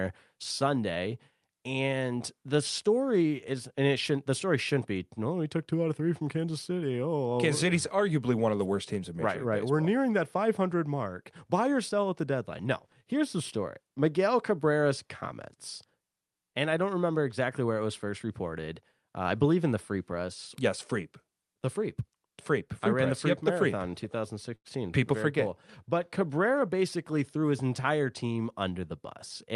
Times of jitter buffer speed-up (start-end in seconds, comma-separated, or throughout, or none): 26.62-27.44